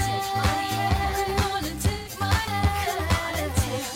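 Throughout the clip there is channel delay (comb filtering). One channel runs around 10 ms behind the other, and when the two are summed to mono, content common to both cancels at evenly spaced frequencies. The first notch falls around 50 Hz, with further notches roughly every 100 Hz above it. The result is a fixed, coloured sound that sits near the point where hollow phasiness gives way to roughness or a hint of doubling.

From 1.93 s to 2.09 s there is AAC frame loss with concealment. About 128 ms of coded audio is missing, which fits a run of roughly three frames. Instead of going silent, the decoder rebuilds the gap from the last good spectrum, with altered phases or interpolated energy. Because the loss is short, it is heard as a brief smeared, noisy or phasey patch rather than a fade toward the noise floor.

At 2.47 s there is a CD skip. The player mutes for about 2 ms, which is heard as a tick, and then resumes from a different place on the disc's spiral. 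The audio jumps forward or back by one or more disc turns, so continuity breaks abruptly at that tick. The cause is the laser being knocked, or thrown by a surface flaw, onto another turn of the spiral.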